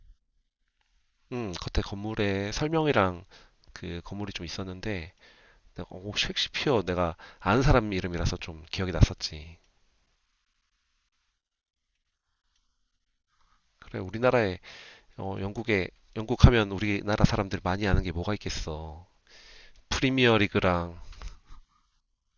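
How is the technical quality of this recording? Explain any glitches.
No glitches can be heard anywhere in the recording. There is nothing in it that needs explaining.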